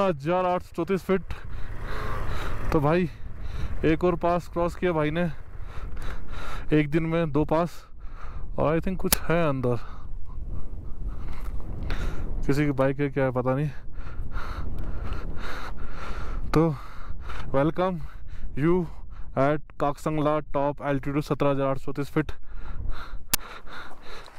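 At 9.13 s a sharp crack cuts through the sound. The same crack returns at 23.34 s. Each lasts about 12 ms. Both are an uninitialised buffer fault. The playback system sent out a block before any audio had been written into it. Whatever data sat in that memory was played as samples. The length fits a 512-sample buffer. A block this short reads as a single loud crack rather than a longer burst.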